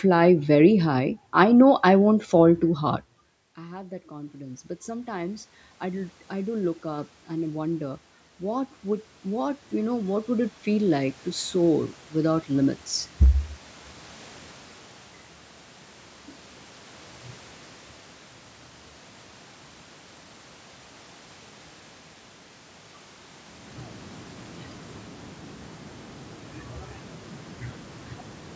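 Automatic gain rising runs from 3.56 to 12.84 s. After the talker moves away from the microphone around 3 s, the input falls by about 21 dB. The gain control then climbs slowly by about 17 dB, so the speech and room noise swell together.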